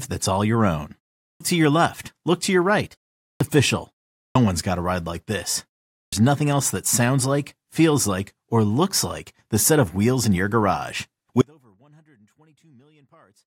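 At 1.27, 3.26, 4.22 and 5.99 s you get a clipped start after a pause: after the short gaps, roughly 0.35 to 0.39 s, the output seems to wake up late. About 134 to 145 ms of each onset gets swallowed, so the sound bursts in abruptly, like after "that's all your own" and before "one's got a ride".

From 11.41 s to the end there's an audio dropout to a faint residue. The sound cuts out abruptly, leaving only a faint trace about 35 dB down, most likely the signal lost upstream while the path after the break stayed live.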